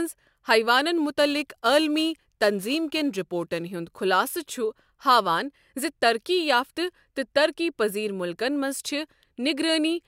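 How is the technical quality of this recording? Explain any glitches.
There is one glitch, a stretch of crude rate conversion from 0.97 to 3.63 s. Across that span the speech carries a gritty, inharmonic fizz riding on the louder and brighter syllables, roughly 25 dB below the speech itself. The sample rate was changed by simply dropping the nearest samples, with no anti-aliasing filter. The pattern of the error fits a conversion from 48 kHz to 44.1 kHz. The skipped samples recur in a fixed cycle, creating shifted, inharmonic copies of the speech.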